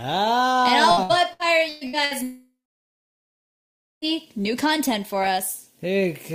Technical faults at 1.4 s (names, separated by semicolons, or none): repeated packet loss (robotic sound)